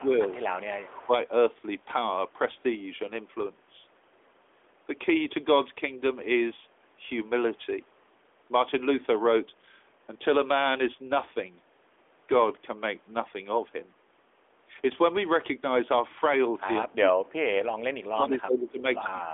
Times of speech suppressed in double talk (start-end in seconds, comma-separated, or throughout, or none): 0.00-0.24, 16.66-17.50, 17.96-19.34